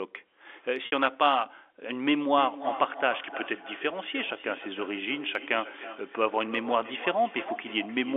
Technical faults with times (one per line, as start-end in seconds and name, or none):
0.86-0.92 packet loss with pitch repetition
2.33-8.16 feedback echo between two devices